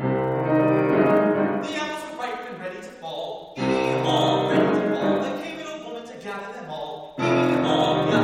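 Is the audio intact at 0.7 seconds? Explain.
Yes, at 0.7 seconds the audio plays through cleanly, with no dropout, click, distortion or other fault at that moment.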